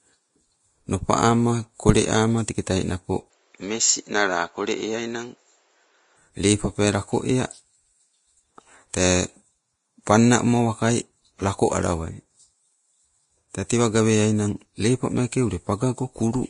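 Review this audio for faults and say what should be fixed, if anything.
Throughout the speech, grainy hiss and smeared consonants point to likely Vorbis compression at a low bitrate, around 33 kbps. A spectrogram shows nothing above 10.5 kHz and blotchy, speckled treble. Encoding at a higher bitrate, or keeping a lossless master, would prevent this.

From 3.3 to 6.17 s the sound turns duller and a little quieter, with faint new background noise, likely an input switched to a poorer device. The spectrogram's upper edge drops to 7.6 kHz, and the waveform shrinks slightly. Locking the recording input so it cannot change devices mid-take would prevent this.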